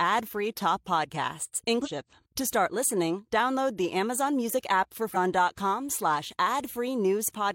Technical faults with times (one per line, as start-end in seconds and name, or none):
1.81-1.88 damaged data in a compressed stream
5.11-5.16 damaged data in a compressed stream